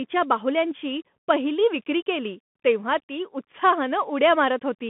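All the way through, the speech has that Bluetooth CVSD headset codec sound: everything sits between about 150 Hz and 3.5 kHz with nothing above 3.8 kHz, s sounds go scratchy, and a grainy hiss rides underneath, which fits a 64 kbps one-bit stream whose step size adapts up and down.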